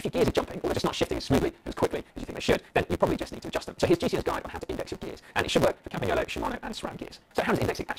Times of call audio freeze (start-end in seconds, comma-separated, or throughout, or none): none